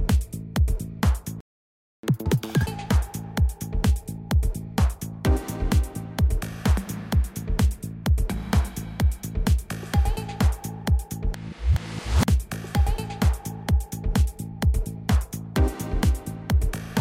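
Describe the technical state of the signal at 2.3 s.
Sound rushes and jumps about ten semitones higher from 2.03 to 2.66 s: catch-up at higher speed, the player resampling its post-stall backlog at double speed.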